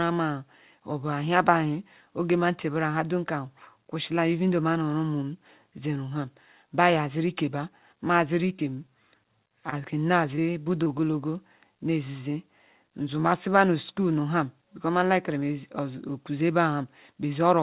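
Repeated packet loss (robotic sound) runs from 8.48 to 8.90 s. Four short holes, the longest about 23 ms, are patched by extending the preceding sound, giving a choppy stutter with pieces missing. Short concealed packet loss follows at 9.48 to 9.52 s and again at 9.70 to 9.74 s. Each time about 20 ms of audio never arrived and was bridged from the last sound, heard as a brief smear or wobble. Throughout, the narrowband call path cuts everything above 4 kHz, which fits a 64 kbps G.711 telephone codec.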